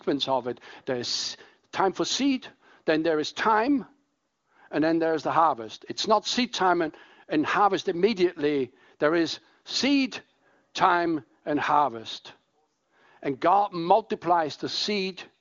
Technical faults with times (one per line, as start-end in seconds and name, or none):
none